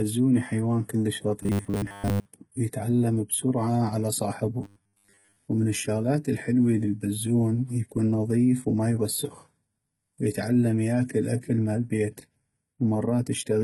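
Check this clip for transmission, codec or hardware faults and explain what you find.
Two kinds of fault are audible. Throughout, the speech has a gritty, metallic treble, likely from heavy HE-AAC compression at around 16 kbps. On a spectrogram, the upper bands appear as smeared copies of the lower harmonics.

From 1.43 to 2.26 s and from 4.63 to 5.38 s, there is robotic sound from repeated short buffers, likely caused by stalled delivery. Repeating a 10 ms chunk imposes a rigid 100 Hz buzz. On the waveform, this shows as identical repeating cycles, and most of the real audio is skipped.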